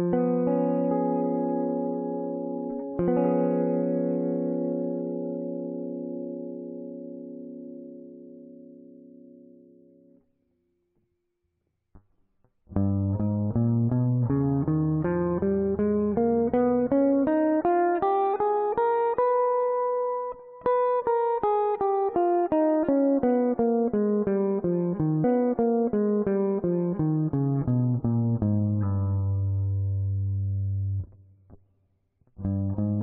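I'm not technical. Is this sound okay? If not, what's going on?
No. At about 25.23 s the audio briefly blips and jumps back, and roughly two seconds of sound play a second time until about 27.23 s. This is a stream segment repeated: the player fetched the same chunk of the stream twice and played both.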